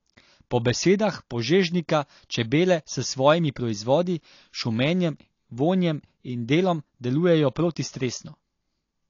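From start to finish the speech carries plainly audible coding damage, most likely AAC compression at a low bitrate such as 32 kbps. Nothing sounds above about 7.1 kHz, so the top of the spectrum is simply gone and the sound is dull. The encoder, short of bits, quantises the frequency lines coarsely and leaves gaps, giving sibilants a fizzy edge and sustained sounds a smeared, warbling texture.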